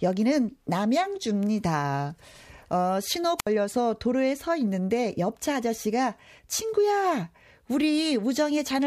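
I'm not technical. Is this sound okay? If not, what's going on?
No. At about 3.38 s there's a wireless microphone squelch dropout: the radio link fades, a short burst of hiss rises, and the receiver mutes the sound for about 66 ms before it returns at 3.47 s. That hiss before the silence sets it apart from a clean digital gap.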